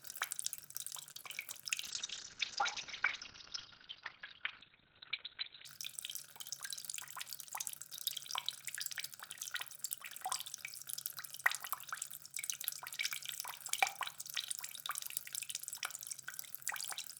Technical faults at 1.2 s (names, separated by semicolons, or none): short stall from a late packet; short concealed packet loss